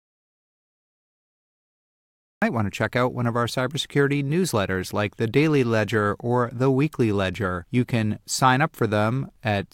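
From 0.00 to 2.42 s an audio dropout to silence leaves silence, likely from lost input; the waveform is flat, the spectrogram blank, until speech cuts in.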